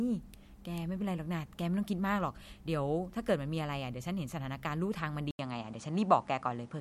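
At 5.31 s the speech drops out for 80 ms, then returns duller, with nothing above 10.5 kHz, a level shift of about 5 dB and faint new background noise. This is likely an input switched to a poorer device.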